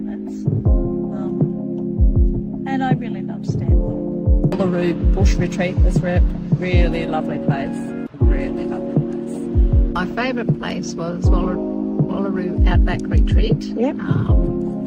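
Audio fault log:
No fault is heard anywhere in the clip.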